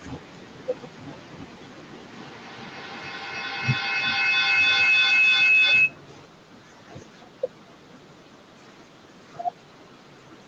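At 2.12 s a feedback howl kicks in and runs until 6.04 s. Two devices in the same room were on the call, so the sound from one loudspeaker fed back into a microphone and picked up level on every trip around. It narrows to a piercing tone somewhere around 3 kHz, peaking at about 23 dB above the speech. Each trip around the loop takes roughly 0.3 s.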